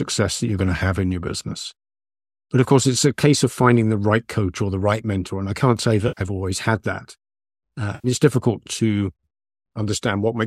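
AAC frame loss with concealment strikes twice, from 6.08 to 6.21 s and again from 7.95 to 8.08 s. Each time roughly 90 ms of coded data never reaches the decoder, which fits about nine low-delay frames. The decoder papers over the gap by rebuilding the missing stretch from the last good spectrum, so each dropout comes through as a brief smeared, noisy, phasey patch in the speech. The light roughness in the surrounding audio is likely from the low-delay AAC compression at 64 kbps.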